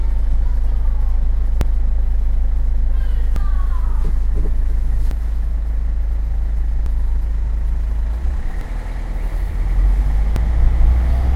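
The audio skips forward at 1.61, 3.36, 5.11, 6.86, 8.61 and 10.36 s. Each skip drops roughly a third of a second. The gaps repeat every 1.75 s. This is audio missing between chunks. The likely cause is a recorder working in blocks of sound, which fits 2-second chunks, losing material each time one block closes and the next opens. The two sides are butted together with no silence, so the sound jumps abruptly at each point.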